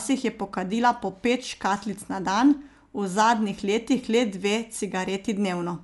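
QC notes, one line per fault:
Throughout, Dolby Digital compression: dull, band-limited speech with nothing above 11.4 kHz and rough, fluttering noise, likely from AC-3 coding at 64 kbps filling starved lines with dither.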